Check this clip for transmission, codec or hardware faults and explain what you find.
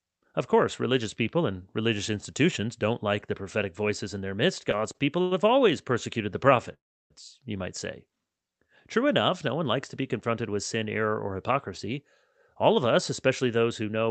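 Three transmission faults turn up, all on the receiving side of a call path that sounds like Opus with the top end cut at about 8 kHz.

Right after "voices in their midst", from 4.71 to 5.33 s, there's a run of repeated stalls (stutter). Packets kept arriving late, so the jitter buffer ran dry five times, the longest for 94 ms. The receiver stretched the last sound to cover 156 ms, roughly a quarter of that stretch, so the speech drags and hiccups, but nothing is actually lost.

At 6.74 s, after "persecuted the", the audio freezes for 362 ms, mostly dead silence (about 330 ms of it), then resumes with "you might say" at 7.12 s. That's a call audio freeze, likely packets held up in transit until the buffer emptied. Playback picks up where it stopped, so a gap is inserted rather than anything being cut.

From 12.55 to 14.10 s there's a jitter buffer speed-up. The buffer had built up extra delay, and to work it off the receiver snipped out tiny pitch-period slices again and again, about a tenth of a second in all. 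The speech runs at about 107% speed at an unchanged pitch and sounds a bit rushed.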